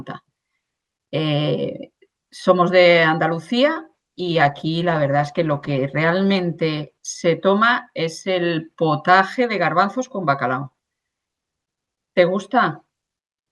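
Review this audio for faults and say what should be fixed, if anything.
From 3.94 s to 7.51 s the speech goes rough and muffled, consistent with a call bitrate drop from around 64 kbps to 16 kbps, with the worst stretch lasting about 1.75 s. The encoder, starved of bits after the bandwidth estimate fell, coded more coarsely and trimmed the high frequencies. Unlike packet loss, there are no gaps or repeated fragments, just a continuous degradation that eases as the rate recovers. Smoothing bandwidth estimation and setting a higher minimum encoder bitrate would prevent it.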